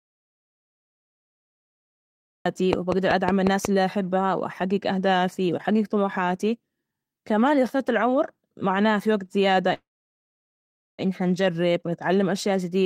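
Speech clip with three separate problems. It opens in an audio dropout to silence that is already under way when the clip starts and runs to 2.46 s. That's plain silence with no room tone at all, so the input was likely lost somewhere upstream, through a disconnected device, a failed link or a stray mute, while the recorder kept writing. Anything said in those first two and a half seconds is simply gone. Right after, from 2.73 to 3.66 s, there's a train of clicks leading into "اللي أحبها وأحجج أهدافي". It's about seven sharp, near-identical pops at a steady 5.4 per second, sitting about 15 dB above the speech, so they poke out clearly and tick through the pauses as well. They most likely come from interference from nearby equipment or a faulty connection or power supply. Later, just after "العمر معناه في وقت", there's a call audio freeze from 9.73 to 11.01 s. The last sound smears on briefly and then drops to silence for about 1.15 s, roughly 1.25 s of filler in total, before the talker resumes with "إن نجرب ونتعلم أشياء". 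Nothing is actually missing. The speech just picks up where it stopped, now running about 1.25 s late, which is the classic sign of a jitter buffer that likely ran dry while packets were held up in transit.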